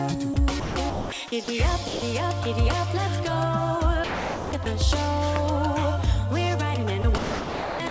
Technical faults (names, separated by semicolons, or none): sound chopped by the voice detector; sound dropped by the voice detector; loud pop